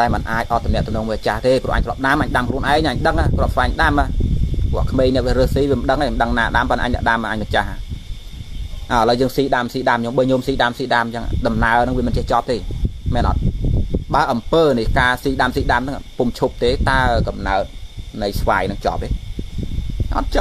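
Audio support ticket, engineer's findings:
Nothing to flag here; I listened through the whole clip and didn't find any faults to write up.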